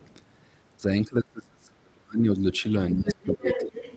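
From 0.0 to 0.14 s, a very faint second voice sits under the start, likely the other side's voice leaking through from an echo canceller that left some loudspeaker sound in the microphone. On a spectrogram it shows as weak, separate harmonic traces.

At 0.79 to 0.84 s the talker's level dips by about 10 dB. From 1.02 to 2.44 s it drops by as much as about 35 dB, and from 2.92 to 3.82 s by about 20 dB. This is speech suppressed in double talk, likely the canceller turning the talker down while both sides spoke. The waveform envelope caves in at these points, and the spectrogram goes faint or blank in patches.

From 3.08 s to the end the leaking voice returns nearly as loud as the talker, its harmonics overlapping the talker's across the 8 kHz band.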